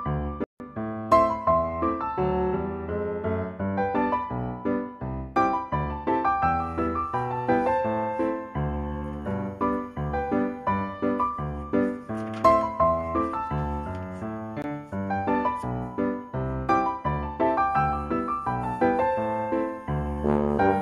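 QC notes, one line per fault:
0.44–0.60 s and 14.62 s, block of digital silence: the sound drops out entirely for 160 ms, then for 19 ms, cutting off and resuming with no fade. It is a missed output buffer or invalid processing values replaced by zeros.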